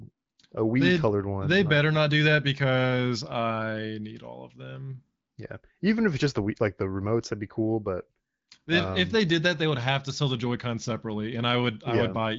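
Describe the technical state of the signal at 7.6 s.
At 7.6 s the speech is intact, carried cleanly through the AMR wideband (HD Voice) codec with its band-limited top end and no fault at that moment.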